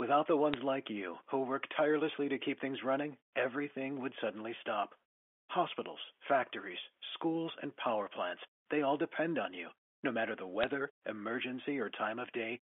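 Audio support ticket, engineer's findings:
Bit errors on the digital phone line. Sharp tick at 0.54 s and a short crackle burst at 10.63–10.69 s. Flipped bits corrupt individual mu-law samples, and hits on sign or high bits make the waveform jump. The error rate is around one bit in a thousand. The underlying line is band-limited, which fits 64 kbps G.711 mu-law.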